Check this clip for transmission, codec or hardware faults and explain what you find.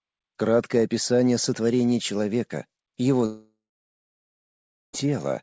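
A long network dropout runs from 3.26 s to 4.95 s. The sound stops arriving and its last moment stretches into a fading buzz, which gives way within a few tenths of a second to about 1.36 s of silence. The likely cause is a break in packet delivery, with the receiver's concealment filling in until it gives up. When audio resumes, about 1.68 s is simply missing. A short packet-loss glitch would be smoothed over, and a mute would cut off cleanly. This gap is longer and begins with that decaying smear. The absence of anything above 8 kHz comes from the G.722 call path at 64 kbps.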